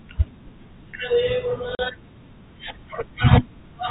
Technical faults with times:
1.75-1.79 packet loss filled with silence

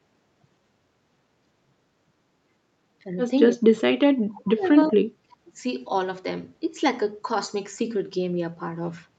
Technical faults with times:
3.04-3.08 speech suppressed in double talk
3.54-3.72 speech suppressed in double talk
4.17-5.63 speech suppressed in double talk
4.62-4.91 echo leak

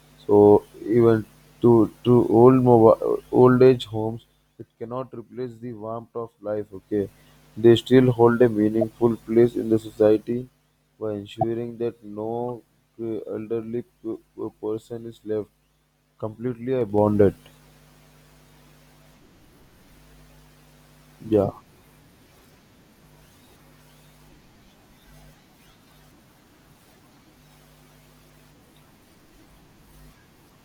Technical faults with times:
3.41-4.86 zipper noise
6.40-7.17 zipper noise
8.81 corrupt frame decoded
9.98-10.67 zipper noise
11.37-11.44 corrupt frame decoded
12.49 corrupt frame decoded
16.81-17.15 zipper noise

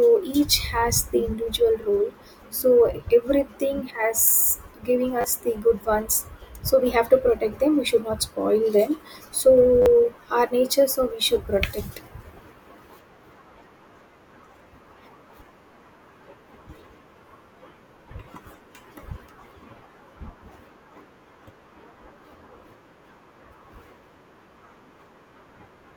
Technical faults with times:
5.21-5.24 repeated buffer
9.82-9.86 repeated buffer

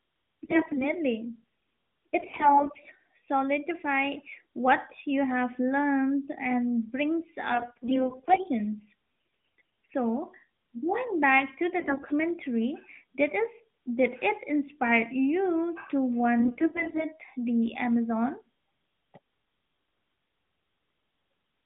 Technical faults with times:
0.44-0.90 AMR bit errors
2.20-2.80 AMR bit errors
7.54-8.49 AMR bit errors
9.58-9.94 AMR bit errors
11.80-12.21 AMR bit errors
16.40-17.07 AMR bit errors

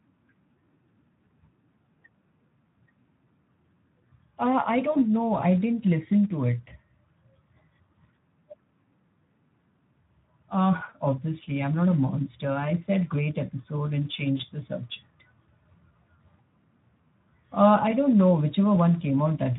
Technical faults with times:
0.00-19.59 Speex codec
4.91-4.98 VoIP packet loss concealed by the speech codec
10.89-10.93 VoIP packet loss concealed by the speech codec
14.37-14.41 VoIP packet loss concealed by the speech codec

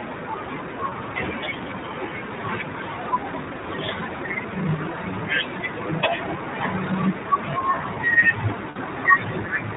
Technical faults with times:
0.00-9.77 iLBC codec
0.90-0.93 lost iLBC frames
8.70-8.78 lost iLBC frames

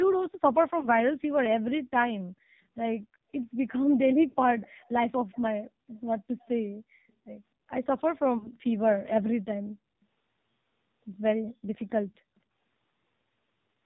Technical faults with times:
0.00-13.85 AMR narrowband mobile codec
0.80-0.88 lost AMR speech frames
4.28-4.36 lost AMR speech frames
8.38-8.48 lost AMR speech frames

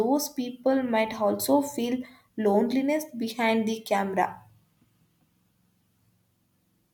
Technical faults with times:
none

